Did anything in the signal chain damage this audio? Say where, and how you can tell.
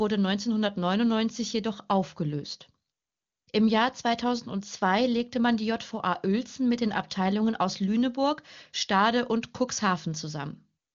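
No, no stage in the chain has damaged this speech. It has the wideband HD Voice sound of AMR-WB, with any coding traces faint at most, which fits the codec's top 23.85 kbit/s mode.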